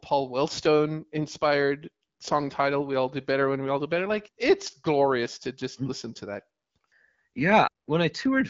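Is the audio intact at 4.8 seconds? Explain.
Yes, the audio is intact at 4.8 seconds, with no fault at that moment.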